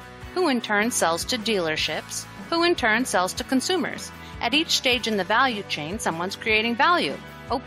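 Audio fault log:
3.98 s, overlap between stream segments: a tiny skip. The time stamps of two adjoining stream segments claimed the same stretch. The player discarded that stretch as doubled even though it was not, so a few milliseconds of real sound are missing. The waveform then jumps from one value to another with nothing in between. Its place, close to 4 s, fits a boundary between 2-second segments.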